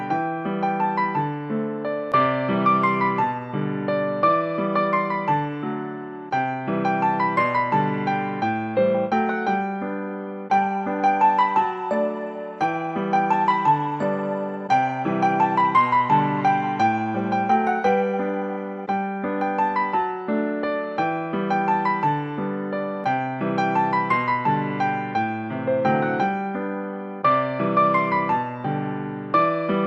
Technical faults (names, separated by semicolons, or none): none